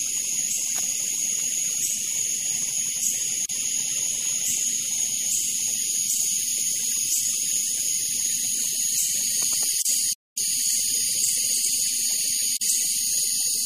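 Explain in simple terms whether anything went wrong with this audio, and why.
Throughout, the sound has a watery, swirly quality, with a muffled top end and smeared edges on sharp sounds. This is plainly audible and points to MP3 compression. The encoder likely ran short of bits, cut off the treble, and dropped quieter detail that flickers in and out.

Three brief silences break the flow, at 3.46 to 3.49 s, 9.82 to 9.85 s and 12.57 to 12.61 s, each lasting about 30 to 45 milliseconds. Each time, the sound picks up exactly where it stopped. These are gaps at a join of encoded pieces, where separately encoded sections were stitched together with their built-in padding silence left in.

From 10.13 to 10.38 s the audio drops out for about a quarter of a second, a longer, more noticeable halt, and then carries on. This is a playback stall, likely caused by the player running out of data or being held up before it could continue.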